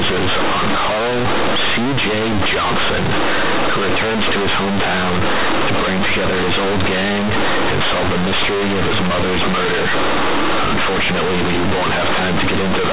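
Companded audio read as linear runs throughout: mu-law bytes played as plain 8-bit samples give harsh buzzing and loud hiss in pauses, not level-dependent clipping distortion.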